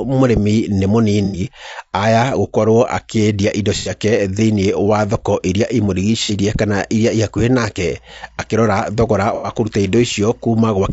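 Low-delay AAC compression runs through the whole of this speech recording: the voice sounds rough and grainy, with noise filling the gaps between harmonics and a thin, synthetic top band. That is likely AAC-ELD, whose short frames resolve pitch poorly, at a bitrate around 32 kbps. AAC frame loss with concealment occurs at 1.25–1.40 s, 3.77–3.91 s, 6.23–6.32 s and 9.35–9.50 s, each a smeared, noisy patch of 60 to 90 ms where missing frames were rebuilt from the last good spectrum rather than decoded. Timecode bleed appears from 7.81 s to the end as a very faint chirping warble alternating around 1 and 2 kHz, the square-wave pattern of linear timecode at a rate matching 23.976 frames per second leaking in from an adjacent track or cable.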